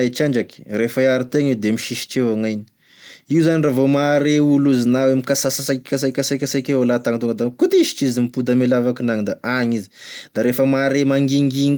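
Speech recording, with no technical faults to be heard.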